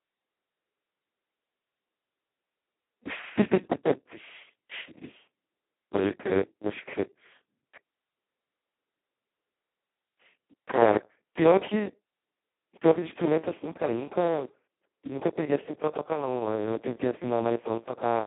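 Speech running through heavy Speex codec damage from start to end, hoarse, buzzy and close to robotic, which fits the lowest Speex setting at roughly 2 kbps, where the excitation is starved of bits. It sits on a 200 Hz to 3.4 kHz line band. A spectrogram shows smeared harmonics and nothing above 3.8 kHz.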